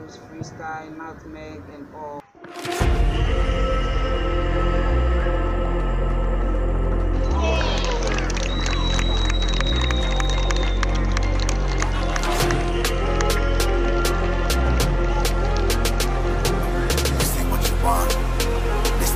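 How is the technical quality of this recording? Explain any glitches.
No dropouts, clicks, distortion or other glitches turn up anywhere in the recording.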